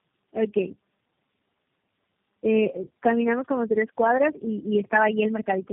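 Speech, with tandem speech coding audible for the whole clip: the sound is rough, muffled and warbly in a way no single codec would produce. It points to a call that was decoded and re-encoded at each network border, with G.729A at 8 kbit/s passes separated by G.711 and iLBC links, so each low-rate coder worked on an already damaged signal. The band stops at about 3.3 kHz, consistent with narrowband telephony throughout.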